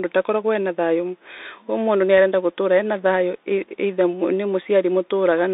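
Throughout, the speech sounds thin and boxed in, about 300 Hz to 3.7 kHz, with scratchy s sounds and granular hiss: a Bluetooth CVSD headset codec, its one-bit delta stream fitting 64 kbps.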